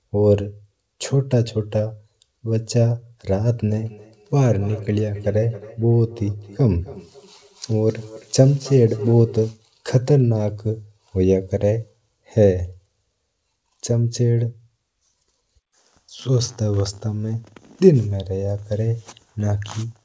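From 3.81 s to 9.48 s, feedback echo between two devices repeats the speech roughly every third of a second. The repeats peak about 19 dB below it, thin and ringing.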